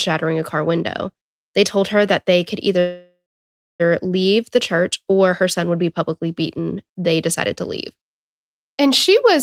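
A call audio freeze runs from 2.79 to 3.82 s. The last sound smears into a fading buzz or hiss, then 0.63 s of silence, before the speech resumes exactly where it stopped, with nothing lost. Delayed packets likely emptied the jitter buffer, inserting a 1.0 s gap.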